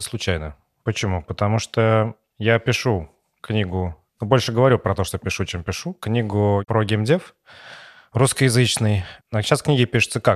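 No technical faults are audible anywhere here.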